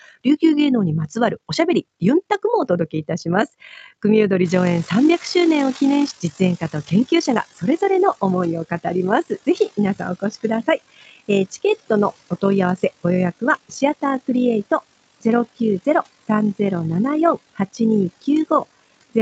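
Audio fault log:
throughout, overlap-add ripple: There's a fast, rough flutter riding on the whole clip, a tremolo of about 6 dB that cycles around 50 times a second. The sound was chopped into windowed frames and stitched back together with an overlap that doesn't add up to a flat gain, so the level bumps up and down once per frame. At that rate it comes across as a rough flutter rather than a slow wobble.
4.44 to 8.10 s, noise suppressor catching up: The room noise jumps by about 18 dB at around 4.5 s, and the suppressor doesn't keep pace with it. At first the noise comes through with less reduction, then it sinks by about 14 dB as the suppressor's noise estimate catches up over roughly 4.1 s. You hear a noisy patch that gradually quietens rather than a clean drop.
6.11 s, skip ahead: Playback jumps forward here, dropping roughly 400 ms of audio with nothing filling the gap. That chunk was discarded while later audio was already queued, so the two sides get butted straight together and the delay shrinks by about the same amount. 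It shows up as an abrupt splice where the flow of the speech lurches ahead and the missing bit just never arrives.
6.75 to 7.83 s and 8.24 to 8.54 s, jitter buffer speed-up: In the second stretch the speech rushes. It runs at 104% in the first and 111% in the second, with the pitch unchanged. The buffer was holding more audio than it wanted, so it trimmed out tiny pitch-period slices over and over, roughly 50 ms in total in the first stretch and 40 ms in the second. That's why the second stretch sounds hurried without getting any higher.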